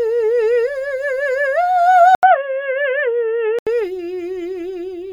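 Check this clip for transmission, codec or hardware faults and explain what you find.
At 2.15 s the music drops out for 80 ms, then turns dull with nothing above 3.4 kHz until 3.67 s, likely an input switched to a poorer device, with faint new hiss.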